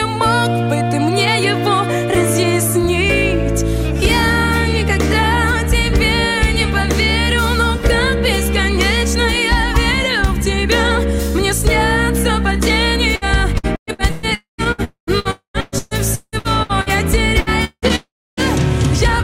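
From 13.15 to 17.93 s the sound turns choppy and robotic, with short patched-over stretches and missing pieces. This is repeated packet loss: well over a dozen holes, the longest 178 ms, each filled by stretching the preceding sound, covering about 29% of the span.

Inside that stretch, at 14.35 to 14.61 s, 14.84 to 15.10 s and 15.31 to 15.57 s, a fading buzz gives way to brief silence of roughly 110 to 130 ms. At 17.96 to 18.40 s the silence lasts 290 ms. The likely cause is a long network dropout, with about 240 ms of audio lost in each of the first three and 420 ms in the last.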